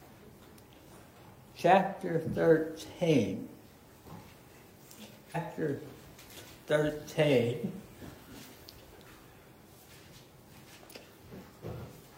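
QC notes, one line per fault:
5.31 to 5.37 s, stream segment skipped: the sound jumps abruptly ahead with a short blip, likely because one segment failed to load and playback continued with the next.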